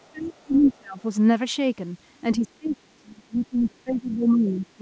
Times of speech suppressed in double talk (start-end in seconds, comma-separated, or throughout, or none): 0.00-1.04, 2.35-4.81